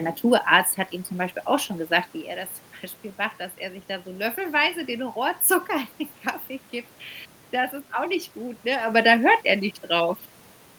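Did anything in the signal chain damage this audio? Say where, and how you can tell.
No, nothing in the chain has damaged this speech; the steady room noise is acoustic, and the level shifts around 2 s and 9 s are the talker moving relative to the microphone.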